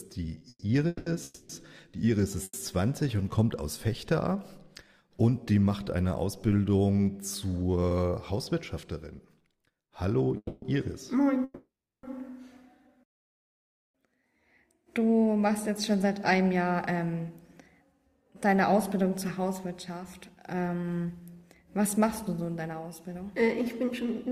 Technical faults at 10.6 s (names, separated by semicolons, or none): call audio freeze